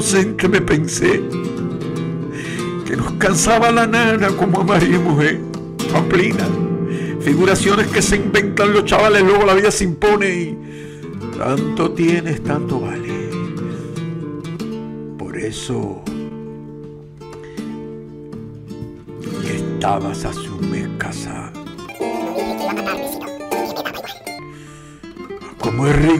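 From 21.89 to 24.39 s the audio is read two samples at a time (double speed): it plays at 2x, an octave higher.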